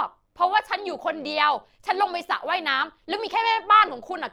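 Throughout, frames were overlap-added with windows that don't sum flat, an overlap-add ripple swinging the speech level by about 6 dB around 100 times a second, heard as a metallic buzz with extra tones around the voice.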